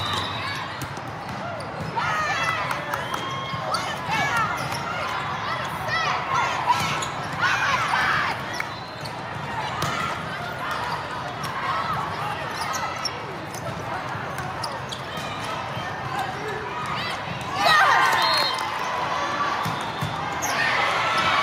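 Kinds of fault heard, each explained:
No kinds of fault are heard in this audio.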